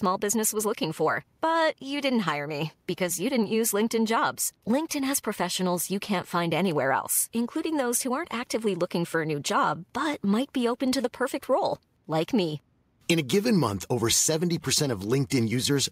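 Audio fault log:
No faults can be heard in the speech, and the signal stays steady throughout, with nothing pointing to trouble in recording, processing or transmission.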